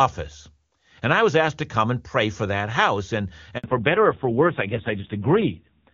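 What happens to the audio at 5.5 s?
Fallback to narrowband, from 3.64 s to the end: the call drops from HD Voice to a low-rate narrowband codec, cutting everything above 4 kHz and leaving dull, rough speech.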